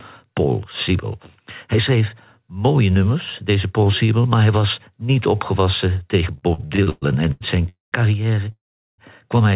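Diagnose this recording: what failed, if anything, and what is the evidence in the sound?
Repeated stalls (stutter) from 6.38 to 7.66 s, after "was niet opgewassen tegen". Eight stretched gaps, the longest 116 ms. Late packets kept emptying the jitter buffer.

Call audio freezes at 7.69 to 7.95 s and 8.52 to 9.01 s. The sound fades to silence, then resumes where it stopped. A network hold-up likely emptied the jitter buffer.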